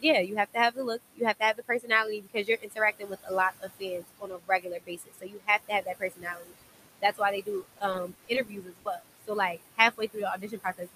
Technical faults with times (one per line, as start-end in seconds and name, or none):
0.00-10.95 noise suppressor artifacts
0.01-10.95 speech cut by the noise suppressor
7.63-9.05 repeated packet loss (robotic sound)